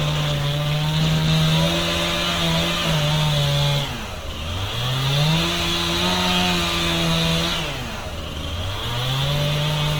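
Opus compression runs throughout. Tones turn grainy, rough and noisy, though the top still reaches 20.1 kHz. The likely cause is a bitrate near 16 kbps.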